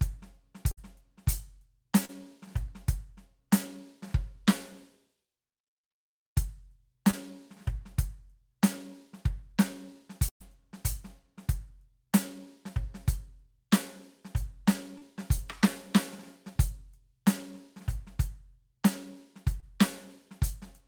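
Right at the start, 0.71 to 0.79 s, there's a burst of packet loss: about 60 ms of the music never arrived, so the receiver stretched the last sound over the hole for roughly 56 ms, fading it, before picking up further along with that stretch gone. The same fault hits harder at 10.29 to 10.42 s, where about 120 ms is lost. The held tail runs around 115 ms but drops away to near silence for about 90 ms of it, giving an audible dropout and a jump forward.

Alongside these there are four short concealed packet losses, at 2.05 to 2.11 s, 7.11 to 7.15 s, 14.98 to 15.03 s and 19.60 to 19.64 s. Each lost just 20 to 40 ms, small enough that the decoder papered over it by extending the preceding sound and crossfading back into the real signal. You hear these as quick smears or little wobbles in the music, and any brief attack landing in the gap can get swallowed.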